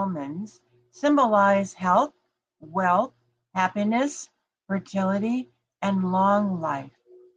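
At 1.85 to 1.87 s, a 20 ms stretch of the speech turns briefly rough and noisy: a lost packet rebuilt from error correction. The packet that went missing was replaced by the low-bitrate backup copy carried in the following packet, so the audio runs on without a gap, but at reduced quality. The same happens at 6.01 to 6.07 s, where about 40 ms sounds coarse, which fits two separate packets lost and rebuilt.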